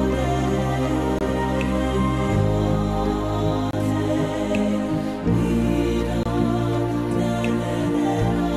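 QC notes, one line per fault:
1.19–1.21 s, 3.71–3.73 s, 6.23–6.26 s: gap between chunks. The sound arrives in 2.5 s pieces, and about 23 ms of silence sits at each join, so it stops dead and restarts. The waveform shows flat holes with hard edges, and the spectrogram shows blank vertical strips.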